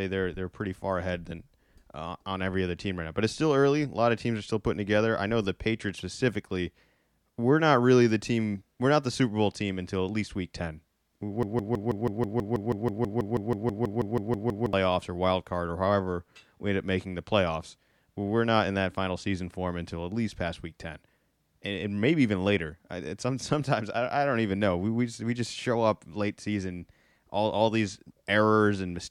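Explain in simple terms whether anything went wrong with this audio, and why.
From 11.43 to 14.73 s, a tiny scrap of speech about 0.16 s long plays about 20 times in a row, stuttering like a broken-record loop until "or wild card or". The player likely stalled and kept repeating its last fragment, so the speech in that gap is lost.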